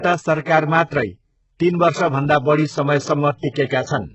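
Throughout the speech, the upper band sounds synthetic rather than missing: nothing real survives above 8 kHz, and the treble is rebuilt from copied lower bands, so s sounds turn gritty and lispy. The heavy damage likely comes from HE-AAC compression at a very low bitrate, around 8 kbps.

Pre-echo appears at 0.87 s for 38 ms, at 3.50 s for 57 ms, and at 3.66 s for 39 ms. Codec noise sized for a loud onset leaks into the quiet moment before it, leaving a brief hiss and a softened attack. That hiss comes ahead of the transient, not trailing it as ringing would.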